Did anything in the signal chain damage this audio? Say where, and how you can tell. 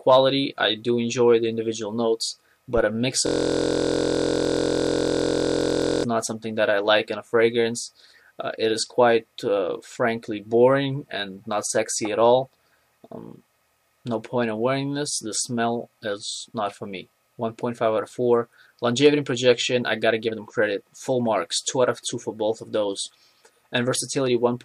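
Yes. A system hang loop at the driver buffer: from 3.27 to 6.04 s a 23.2 ms slice repeats exactly as a steady 43.1 Hz buzz, fitting a 1024-sample buffer, where a dropout would leave silence.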